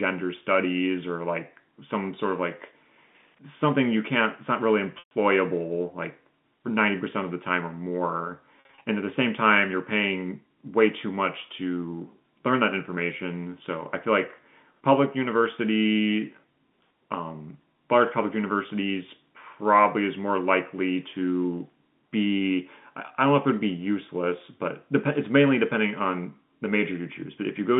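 At 4.99 to 5.11 s, about 120 ms of speech goes missing to packet loss with pitch repetition: the receiver loops the last pitch period, giving a held, buzzy tone that fades rather than stopping dead. At 8.56 to 8.84 s, 160 ms is lost in scattered bursts over 280 ms, none longer than 50 ms, so the sound flutters between brief drones and real speech. The repeated pitch distinguishes it from a plain dropout's silence, heard through the 150 Hz to 3.6 kHz telephone band of G.711 coding.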